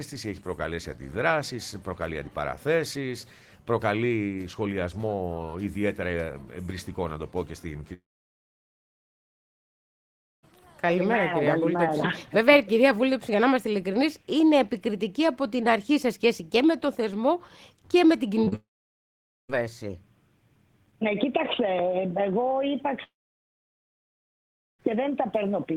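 The audio has three long network dropouts, each likely caused by a network outage: 7.93 to 10.45 s (2.5 s lost), 18.56 to 19.51 s (0.94 s) and 23.03 to 24.81 s (1.76 s). In each, the last sound carries on briefly as a fading buzz or hiss before silence takes over. The audio then resumes past the missing section. Just before the second dropout, short concealed packet loss hits at 18.45 to 18.48 s (20 ms) and 18.48 to 18.54 s (40 ms). The receiver extrapolates across both gaps, producing a quick smear or wobble.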